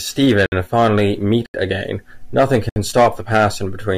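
At 0.46 to 0.52 s, 1.46 to 1.54 s and 2.69 to 2.76 s, the speech drops into a block of digital silence lasting 60, 80 and 68 ms. Samples were zeroed, likely from an unfilled output buffer. Each gap is a short hole.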